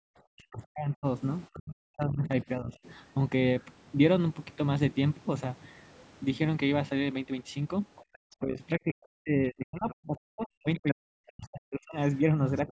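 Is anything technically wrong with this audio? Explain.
Yes. The speech is clipped back by an echo canceller in several places, and a second, far-end voice bleeds into the recording.

Speech suppressed in double talk, from 0.0 to 2.77 s, from 8.4 to 11.98 s, and briefly from 12.65 to 12.69 s. The voice sinks, thins out or drops away in pieces. It loses roughly two seconds in the first stretch and about three in the second, with dips of around 40 dB at their deepest. The last one is a slight dip of about 10 dB. The likely cause is that both parties were talking at once, so the canceller couldn't separate the talker from the loudspeaker echo and attenuated everything.

Other side's voice leaking through, at 3.6 to 3.65 s, 7.96 to 8.36 s, 10.75 to 11.32 s and 12.17 to 12.72 s. A second voice appears in brief fragments under the talker. Most are faint, roughly 30 to 35 dB below the speech. 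The one at 10.75 s is much more prominent, only about 10 dB down. This is likely the far end playing from the talker's loudspeaker and reaching the microphone, with the canceller leaving residue behind. The call's normal band limit, with nothing above 8 kHz, is also present.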